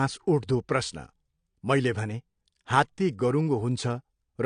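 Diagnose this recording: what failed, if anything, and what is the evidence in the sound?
The codec stage is where it went wrong. Across the whole clip the speech has a hard ceiling, with nothing above 9.9 kHz, so it sounds dull, and the sibilants and sustained vowels carry a fizzy, warbly smear. That's the signature of AAC compression, likely AAC-LC squeezed to a low rate that fits around 32 kbps. The encoder starves the upper bands of bits, drops them outright, and coarsely quantises what's left in each frame, which gives that swirly texture.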